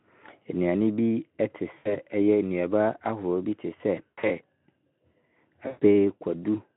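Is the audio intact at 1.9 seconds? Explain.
No. From 1.77 to 1.97 s there is VoIP packet loss concealed by the speech codec: about 80 ms of audio went missing, and the decoder stretched its last pitch and filter with falling gain. It sounds like a buzzy, fading smear. A spectrogram shows repeated, blurred harmonics dimming; the waveform shows shrinking periodic cycles.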